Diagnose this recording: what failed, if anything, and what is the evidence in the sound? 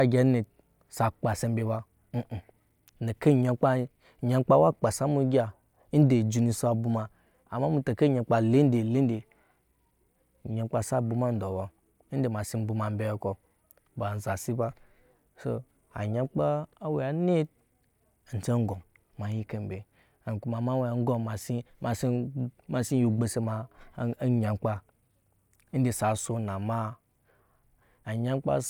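Nothing failed; the speech recording shows no detectable faults.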